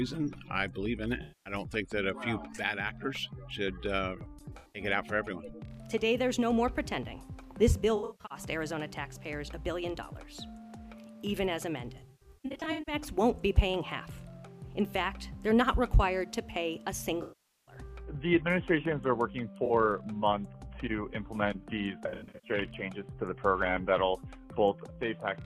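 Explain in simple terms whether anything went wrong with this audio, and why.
Yes, there is AAC frame loss with concealment at 1.22–1.53, 4.53–4.82, 7.96–8.38, 11.97–12.95, 17.22–17.75, 19.65–19.71 and 22.09–22.50 s. Chunks of the encoded stream went missing, and the player patched each gap by guessing from the last good sound. That leaves brief smeared, hissy or phasey patches rather than hard clicks or dead silence, which sets it apart from a simple dropout. The worst is near 12 s, where the broken patches are spread over almost a second.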